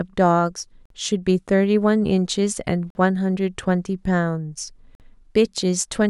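At 0.86, 2.90 and 4.95 s the speech cuts to silence for about 48 ms each time. This is a gap between chunks. The audio comes in 2-second chunks, and silence sits at each join. Nothing is lost, but hard-edged holes break the flow.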